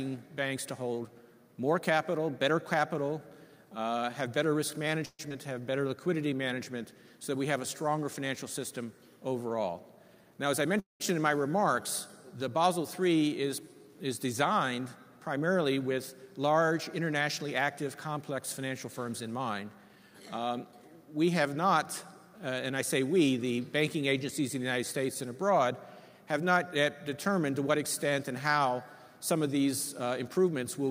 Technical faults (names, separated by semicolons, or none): call audio freeze; skip ahead; jitter buffer slow-down; jitter buffer speed-up